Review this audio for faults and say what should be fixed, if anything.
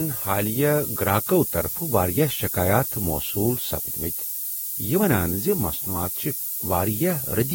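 Low bit depth with noise shaping runs through the whole speech clip. The samples carry only 5 bits, and the rounding error is fed back so it is pushed toward the top of the band. The result is a steady, thin hiss that climbs sharply in the highs and sits at roughly the level of the speech itself. Plain truncation without shaping would instead give a gritty, flatter distortion that follows the voice. Here the hiss persists evenly through pauses and is tilted upward. To prevent it, keep the signal at 16 bits or more through every stage and dither only once, at the final export.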